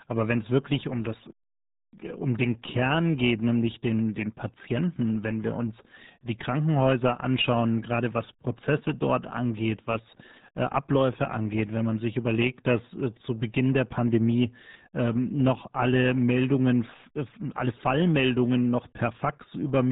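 Throughout, the speech carries heavy RealAudio 14.4 codec damage: nothing passes above 3.8 kHz, leaving it muffled and gargly, consistent with a roughly 8 kbit/s dial-up stream.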